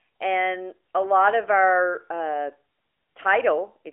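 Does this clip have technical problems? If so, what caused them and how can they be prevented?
No, there's nothing to fix here: it's ordinary speech over an AMR narrowband mobile codec link, and the way the sound tops out around 3.8 kHz alongside the usual 300 Hz to 3.4 kHz phone band, with only light codec colouring, fits that codec's 12.2 kbps mode working as intended.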